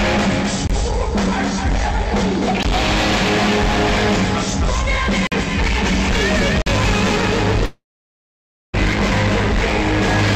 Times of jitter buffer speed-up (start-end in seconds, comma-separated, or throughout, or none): none